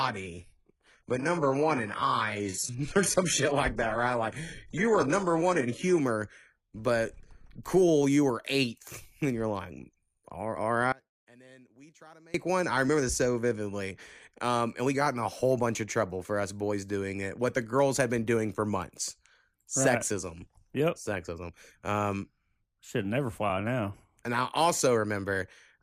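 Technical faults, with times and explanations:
0.0 to 6.0 s, adaptive stream starting at a low bitrate: the player opened on a very low-bitrate HE-AAC version, which fits about 12 kbit/s, before switching up to a cleaner AAC-LC stream, which fits about 96 kbit/s. Until 6.0 s the treble is thin and synthetic with heavier codec artefacts, then quality jumps with no gap.
10.92 to 12.34 s, audio dropout to a faint residue: the wanted signal was likely lost for 1.42 s while the path stayed live. After "you're like all all" the speech cuts out abruptly, leaving only a faint sound about 25 dB down, and returns mid-flow at "one I remember this".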